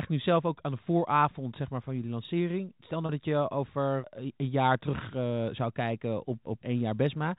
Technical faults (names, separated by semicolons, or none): packet loss with pitch repetition